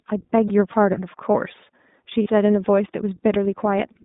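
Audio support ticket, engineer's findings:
iLBC codec, whole clip: speech band-limited to about 150 Hz to 3.7 kHz, plainly rough and synthetic; independent per-frame excitation coding, consistent with 20 ms frame mode near 15.2 kbps.

Lost iLBC frames, 0.47 and 2.22 s: about 40 ms of held buzzy vowel each, fitting two dropped 20 ms frames; decoder repeats last pitch cycle with noise, then recovers almost immediately.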